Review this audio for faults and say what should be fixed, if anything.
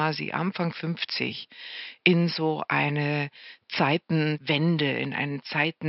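Nothing here needs fixing: the speech signal is intact throughout, with only the room's own background noise present at about 52 dB below the speech, which belongs to the recording itself rather than to the system.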